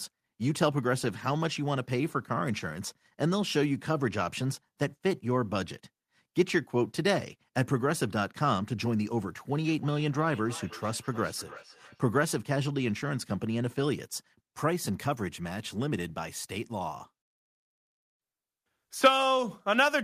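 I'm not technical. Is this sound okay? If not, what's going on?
No. Between 9.62 and 12.02 seconds there is feedback echo between two devices: two devices in the same room are on the call, so one microphone picks up the other's speaker, and the speech comes back again every third of a second or so, thinner and ringing.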